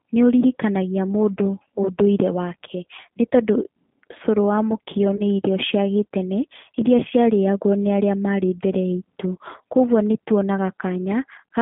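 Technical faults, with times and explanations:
Throughout: G.729 codec. The speech is confined to roughly 150 Hz to 3.5 kHz and has a rough, slightly synthetic edge, which fits an 8 kbit/s G.729A coder rebuilding each 10 ms frame from a vocal tract filter, a pitch predictor and a few pulses rather than the waveform itself. Unlike a simple band-limited telephone line, the damage is plainly audible.
5.16 to 5.22 s: VoIP packet loss concealed by the speech codec. Between "cũrũ wa mũkio" and "nĩ irio cia gĩtene" about 30 ms of audio goes missing, which points to a single lost packet. The decoder stretches its last pitch and filter into a brief buzzy tone or coloured noise that fades instead of leaving silence. Because each frame builds on the previous one, the voice stays weak or distorted past the gap, lasting to about 5.22 s.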